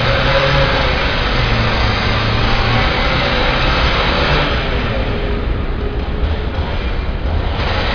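A recording of everyday sounds, and nothing technically wrong turns up anywhere in it.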